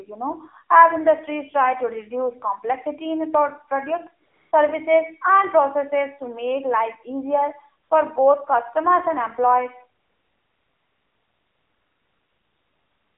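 AMR narrowband mobile codec runs throughout: the band is confined to roughly 300 Hz to 3.4 kHz, and the buzzy, synthetic coloring points to a low bitrate around 7.4 kbps, where few pulses per subframe drive the vocal tract model and the damage is plainly audible.

AMR comfort noise fills three pauses: 4.26 to 4.52 s, 7.84 to 7.90 s just after "to make life easier", and from 10.02 s to the end after "customers and employees". Each time, speech frames stop and the receiver substitutes smooth synthetic noise that switches in abruptly.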